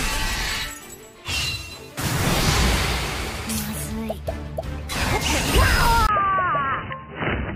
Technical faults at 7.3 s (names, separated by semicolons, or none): input switched to a poorer device